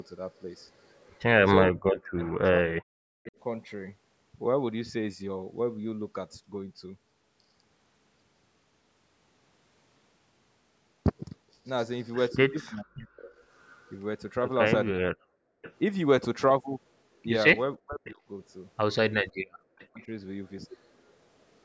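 A speech recording from a call shows echo canceller trouble at both ends of its length. Between 1.68 and 3.35 s, and again between 12.62 and 20.12 s, the canceller was likely facing double talk, with both sides speaking at once. Unable to separate the near talker from the loudspeaker echo, it turned everything down. This is speech suppressed in double talk: the voice dips by as much as roughly 40 dB, in pieces adding up to around one and a half seconds in the first stretch and about two seconds in the second. From 12.76 to 21.12 s there is an echo leak. The far end's canceller likely failed to remove all of what its microphone picked up from the loudspeaker, and the remainder was sent back. It is heard as a copy of the speech delayed by 507 ms, sitting about 25 dB below the direct voice, faint. The canceller also clamped the microphone hard while the loudspeaker was active, so the background is gated by the echo canceller twice. 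At 15.55 to 15.62 s the room sound drops by about 38 dB, and at 19.32 to 19.38 s by about 35 dB. Each dropout lasts around 70 ms before the ambience snaps back. The call's band limit, with nothing above 8 kHz, is ordinary microphone processing rather than part of these faults.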